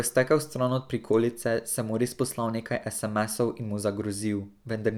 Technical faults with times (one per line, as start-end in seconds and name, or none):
none